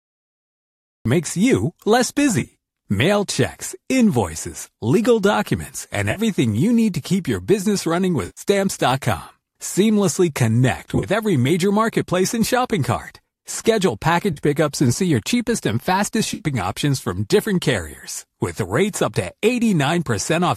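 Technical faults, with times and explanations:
0.00 to 1.06 s, cut-off start: the clip begins in digital silence and jumps at 1.06 s straight into "makes you less" in the middle of a sound, with no natural attack or fade-in. Capture or streaming started after the talker was already speaking, so the opening of the phrase is simply missing.
2.40 to 2.54 s, 6.11 to 6.20 s, 8.26 to 8.41 s, 10.93 to 11.06 s, 14.33 to 14.40 s and 16.34 to 16.42 s, AAC frame loss with concealment: six brief smeared, noisy, phasey patches, each covering 40 to 110 ms of lost audio. The decoder rebuilds each gap from the last good spectrum with scrambled phase, so the sound blurs instead of dropping out. The gap lengths fit losses of roughly 10 ms frames. The first and fourth patches are broken up rather than continuous: 80 ms lost across 120 ms, with the longest run about 20 ms, and 70 ms lost across 100 ms, with the longest run about 40 ms. 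The 6.11 s patch falls between "invoices legal documents and" and "you need to keep", and the 16.34 s patch falls between "your cheapest and fastest" and "options from different carriers". The light graininess of the surrounding speech likely comes from low-delay AAC-ELD at 64 kbps.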